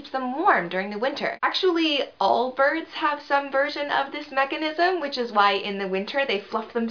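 No technical faults can be heard anywhere in the clip. There is no moment in the audio that calls for a timestamp or a closer look.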